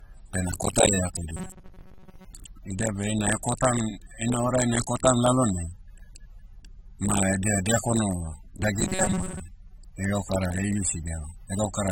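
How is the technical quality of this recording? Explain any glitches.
The speech has two kinds of trouble: a low-bitrate source underneath the whole file, and two stretches of robotic buzz.

Throughout, this is low-bitrate audio saved at a high bitrate. It's an MP3, but the artefacts it carries point to a much earlier low-rate encode, likely something like AAC at under 30 kbit/s, later re-encoded at a generous MP3 rate. The bigger file can't bring back what that first pass threw away, so the damage stays baked in.

From 1.37 to 2.25 s and again from 8.80 to 9.41 s, you get robotic sound from repeated short buffers. The voice collapses into a stiff metallic drone at 188 Hz, which fits a loop of roughly 5.3 ms being replayed, likely because fresh audio wasn't arriving in time. Most of the first stretch and about half of the second is repeated material, so the speech there is only loosely trackable under the buzz.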